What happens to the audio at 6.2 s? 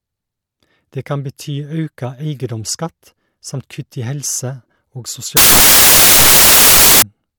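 Samples built from the wrong bytes, 5.37 to 7.02 s: the low bits become each sample's main part, so the speech turns into loud, harsh broadband noise.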